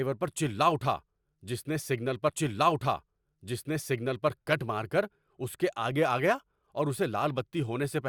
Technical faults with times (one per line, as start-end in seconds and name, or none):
2.29-4.29 stream segment repeated